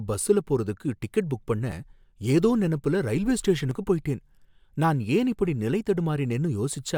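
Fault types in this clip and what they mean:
Overlap between stream segments: overlapping timestamps make the player cut real audio. Brief skips occur at 1.72 s and at 3.71 s, the second after "ஏதோ நெனப்புல ரயில்வே".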